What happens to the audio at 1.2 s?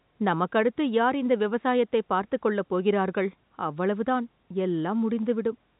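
Nothing goes wrong at 1.2 s: the speech carries on intact through that moment, heard through the band-limited telephone coding with its top cut off at 4 kHz.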